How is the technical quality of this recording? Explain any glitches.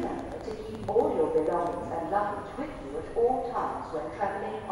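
A train of clicks mars the opening. From 0.03 to 1.74 s, something, likely electrical interference or a faulty connection, injects about fifteen similar pulses at an uneven 7.6 per second. They are heard as irregular ticking that pokes roughly 5 dB above the sound.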